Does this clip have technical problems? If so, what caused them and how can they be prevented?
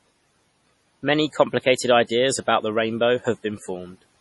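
Yes. Throughout the speech the sound is watery and swirly, with a metallic chirp on s sounds, consonant attacks smeared, and nothing at all above 11.5 kHz. This is likely heavy MP3 compression at a low bitrate, consistent with about 32 kbps. The encoder ran short of bits, so it cut the treble at a fixed point and zeroed quieter frequency lines, which then flickered in and out between frames. To prevent it, encode at a higher bitrate or use a lossless or more efficient codec.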